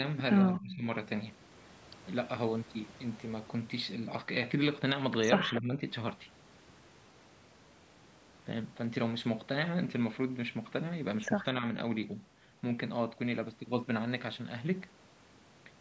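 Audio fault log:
0.56–0.75 s, echo leak: A faint, delayed second copy of the speech trails the original by 230 ms and sits roughly 20 dB below it. This is likely residual loudspeaker sound that the far end's echo canceller failed to remove before sending it back.
0.6–0.87 s and 5.6–5.81 s, speech suppressed in double talk: The speech briefly drops in level, by roughly 20 dB in the first instance and roughly 10 dB in the second. Each dip lasts a few tenths of a second. The likely cause is an echo canceller that could not separate the local talker from simultaneous loudspeaker sound and turned both down.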